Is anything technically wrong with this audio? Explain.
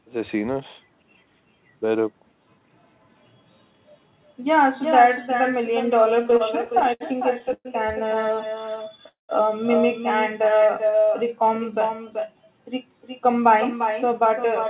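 Yes, there are several faults in this speech, all of them heard through a narrowband call path that has nothing above 4 kHz.

Echo with no canceller runs through the whole clip. The far end's loudspeaker was picked up by its microphone, and nothing removed it, so the speech returns after the network round trip, roughly 0.4 s later and about 6 dB quieter. It sounds like a thin shadow trailing every phrase. On a spectrogram each syllable has a fainter duplicate offset to the right. The waveform shows the same smeared, doubled envelopes.

Repeated stalls (stutter) occur from 6.23 to 7.03 s and again from 8.31 to 9.08 s. Packets kept arriving late, and the jitter buffer ran dry ten times and then eleven times. Each time the receiver stretched the last sound to fill in, covering 168 ms and 101 ms, with the longest gap 68 ms. The speech drags and catches but nothing is lost. On a spectrogram you see short smeared, repeated slices and brief flat-topped holds in the waveform.

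Call audio freeze occurs at 7.53 to 7.68 s and at 9.08 to 9.32 s, right after the second stutter. The likely cause is packets held up in transit, emptying the buffer. The receiver extends the last sound into a fading buzz or hiss, then 40 ms and 140 ms of silence, before resuming where it stopped. These insert gaps of 117 ms and 205 ms. On a spectrogram a harmonic smear decays into a blank vertical band. In the waveform the envelope tapers to a flat line.

Jitter buffer slow-down runs from 10.44 to 11.97 s. To rebuild its reserve the receiver repeated single pitch periods and bits of pauses, adding 175 ms, so the speech plays at 89% speed with unchanged pitch. Vowels sound drawn out. On a spectrogram, harmonic bands stay at the same frequencies but stretch horizontally. The waveform shows near-identical repeated cycles.

Jitter buffer speed-up runs from 13.64 to 14.65 s. The buffer held too much audio, so the receiver cut short pitch-period pieces, removing about 50 ms in total. 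The speech plays at 105% speed at the same pitch and sounds slightly hurried. On a spectrogram the syllables are compressed in time with their pitch lines unchanged. The waveform has slightly shortened voiced segments with tiny discontinuities at the splice points.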